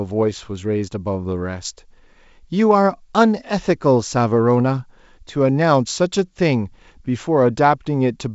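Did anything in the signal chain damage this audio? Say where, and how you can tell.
No, nothing in the chain has hurt this speech; it's riding on G.722 wideband telephone coding at what sounds like 64 kbit/s, so the top end stops around 7.7 kHz, and whatever that coding leaves behind is faint at most.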